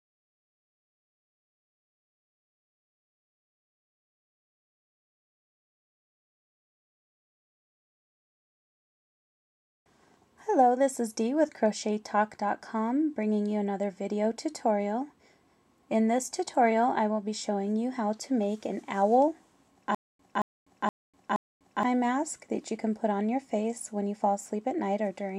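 From 19.95 to 21.83 s, stutter with silent gaps, likely a stalled stream: a 225 ms burst repeats four times, identical waveform blocks between flat 247 ms gaps.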